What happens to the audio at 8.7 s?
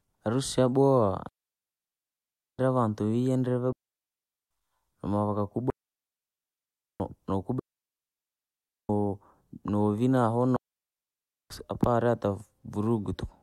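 At 8.7 s the speech sits inside a digital wireless dropout from 7.59 to 8.89 s: the receiver lost too much data and muted for 1.3 s, leaving clean near silence without noise bursts.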